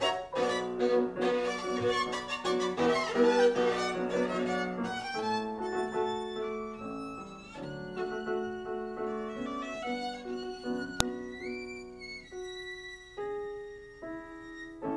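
At 11.00 s a file header is played as audio: a new segment was joined on without its leading header bytes being stripped, so those few dozen bytes were decoded as sample values. The result is a single sharp, loud click lasting about a millisecond, unrelated to the surrounding sound. On a waveform it shows as an isolated spike; on a spectrogram, a thin vertical line spanning the whole frequency range.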